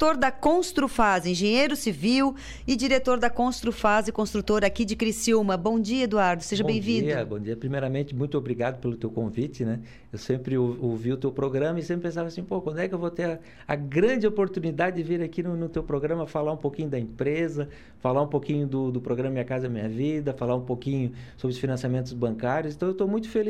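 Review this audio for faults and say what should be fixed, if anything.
No faults found, so nothing needs fixing.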